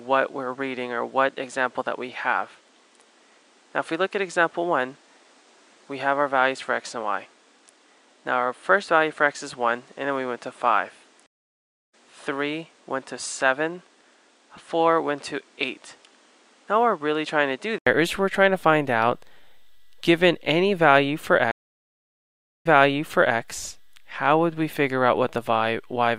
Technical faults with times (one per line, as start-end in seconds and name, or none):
0.00-17.86 input switched to a poorer device
11.26-11.94 stream reconnect
21.51-23.38 stream reconnect